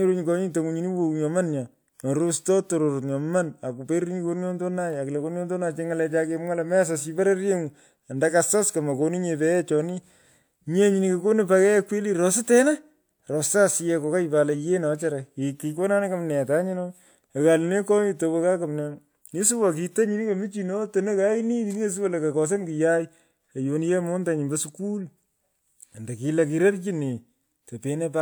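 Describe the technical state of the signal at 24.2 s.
At 24.2 s the speech signal is intact, with no audible technical fault at that moment.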